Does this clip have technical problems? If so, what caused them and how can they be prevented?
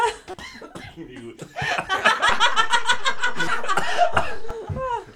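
Yes. Damaged data in a compressed stream hit at 0.30–0.34 s and again at 3.47 s. Corrupted bytes made the decoder lose frame sync, giving brief glitches. Checksummed transport, error-resilient framing and verified file copies prevent this.

A DC step at 2.29 s shifted the waveform's zero line, heard as a low thump. The offset lasted until 4.51 s. A DC-blocking high-pass filter and stable converter calibration prevent this.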